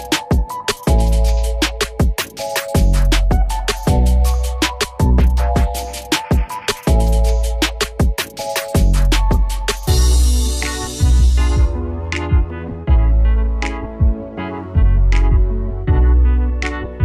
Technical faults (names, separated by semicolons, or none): none